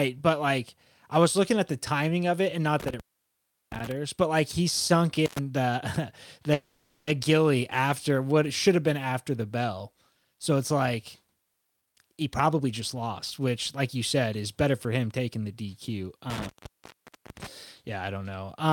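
Crackling dropouts at 2.80 to 3.92 s, after "timing of it and", at 5.26 to 5.39 s, after "but like he sunk", and at 16.30 to 17.47 s leave faint hiss for about 0.72 s, 0.08 s and 0.81 s. This is intermittent contact: a loose cable or plug briefly opening the line. From 6.53 to 7.09 s the sound stretches into a fading buzz for 0.54 s, then resumes with nothing lost. That is a call audio freeze, likely from held-up packets emptying the jitter buffer. From 11.77 to 15.29 s, after "bell so it's like", the audio hurries at about 115% speed with unchanged pitch. This is jitter buffer speed-up, with roughly half a second trimmed to cut delay.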